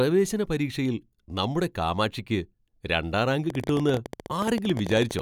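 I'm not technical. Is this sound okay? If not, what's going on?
No. From 3.50 s to 5.20 s, just after "നമ്മുടെ കാമാക്ഷിയ്ക്ക് രണ്ടാം റാങ്ക്", there is a train of clicks: roughly thirty sharp ticks, about 17 per second, at an uneven pace and louder than the speech itself. Each tick sounds much the same, and they keep going between words, which sets this apart from a single pop or the random, varied crackle of a dirty connection. The likely cause is interference from nearby equipment or a faulty connection or power supply.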